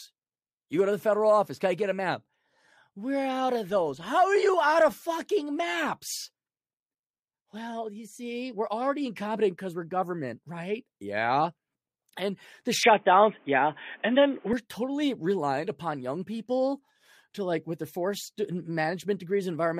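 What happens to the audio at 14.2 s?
At 14.2 s the speech sits inside a stretch from 12.83 to 14.53 s where the input has likely switched to a poorer device. Nothing comes through above 3.6 kHz, so it sounds dull and boxy. The level shifts by about 5 dB. A new noise floor sits well below the speech. The change happens with no gap.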